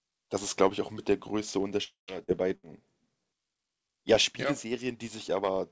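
From 1.84 to 2.11 s a long network dropout is the likely cause: roughly a quarter second is lost, the last sound trails off and 130 ms of near-silence shows as a blank band. At 2.24 to 2.31 s, short concealed packet loss patches 40 ms with continued sound, a brief smear. At 2.56 to 2.66 s, a burst of packet loss fills 73 ms by continuing the last sound as it fades. The waveform envelope decays, then resumes with 80 ms missing. Throughout, the spectrogram shows nothing above 8 kHz, which fits a G.722 call codec.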